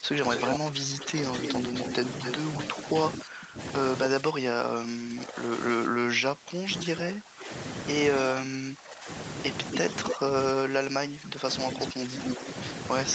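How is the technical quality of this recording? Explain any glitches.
The recording is impaired by call processing faults throughout.

Speech suppressed in double talk runs from 0 to 1.74 s, affecting roughly a second, and again from 2.72 s to the end. The level dips by up to about 15 dB. Both sides were likely talking at once, so the echo canceller turned everything down.

Echo leak appears at 0.34 to 2.65 s, 9.72 to 10.15 s, and 11.72 s to the end. Delayed copies arrive after 250, 276 and 284 ms. The first two sit about 5 dB below the speech, and the last one is about as loud as the speech. A loudspeaker echo the canceller failed to remove is the likely cause.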